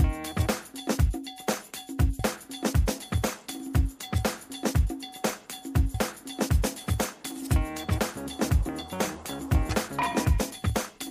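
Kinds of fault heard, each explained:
Audio missing between chunks: at 2.19, 5.94 and 9.69 s the sound jumps forward abruptly, with about a third of a second lost each time and the two sides butted together without any silence. The skips recur every 3.75 s, which likely reflects a process handling the audio in 4-second chunks and dropping a short stretch each time it closes one chunk and opens the next, so each join shortens the spacing.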